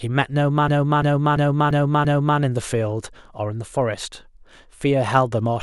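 From 0.19 s to the end, faint ticks recur roughly ten times a second through the speech, clock slip clicks, likely from unsynchronised clocks drifting around 200 ppm apart. From 0.68 s to 2.39 s, one 341 ms chunk stutters five times at 2.93 Hz, a system hang loop where the hardware kept replaying its buffer, consistent with 16384 samples.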